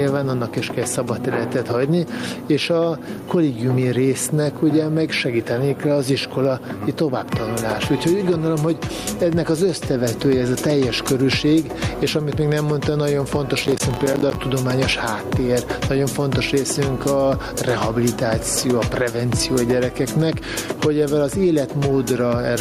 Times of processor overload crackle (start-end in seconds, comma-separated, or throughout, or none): 13.63-14.36